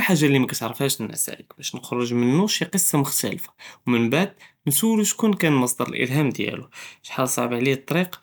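No technical faults can be heard anywhere in this recording.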